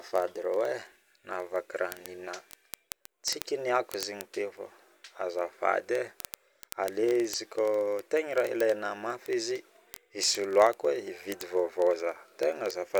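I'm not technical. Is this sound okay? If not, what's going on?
No. From 0.11 s right through to about 12.98 s there's a steady stream of sharp ticks under the speech, roughly fifty every second, several hundred in all. That's word clock ticks: the device receiving the digital audio is running on its own clock, a rough tenth of a percent off the sender's. Each time the two drift apart, a single sample gets dropped or doubled, and you hear a sharp tick.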